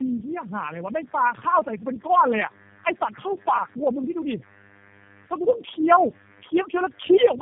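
Throughout the clip, tandem speech coding is at work: the speech was decoded and re-encoded across what sounds like about four low-rate codecs in a row, each compressing the previous one's errors. The result is rough, warbly and muffled, with nothing above 3.5 kHz.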